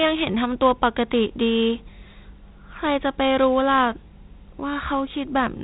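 Throughout, Dialogic VOX ADPCM coding, which fits a 32 kbps rate, removes everything above 3.9 kHz and leaves a plainly audible gritty hiss following the speech.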